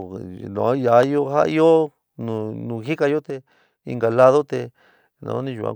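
A sharp pop lands on the speech between 1.03 and 1.05 s, standing well above the talker's level while the voice continues beneath it. This loud pop is likely a brief voltage spike, from a plug, switch, static discharge or driver glitch, entering the signal chain.

From 3.30 to 3.85 s the speech abruptly becomes quieter by about 6 dB, then returns to full level. This sudden dip is likely one channel dropping out, leaving the mono sum with only one side's contribution for roughly half a second.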